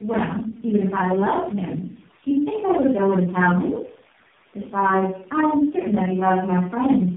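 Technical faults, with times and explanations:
Throughout, tandem speech coding: the speech sounds rough, muffled and warbly, with nothing above about 3.8 kHz, and it is more degraded than a single narrowband codec would leave it. The pattern fits four low-rate speech coders in a row, ending in something like AMR-NB at 6.7 kbit/s. Each link decodes the speech and re-encodes it, so every coder models the previous one's errors. Distortion compounds at each hop.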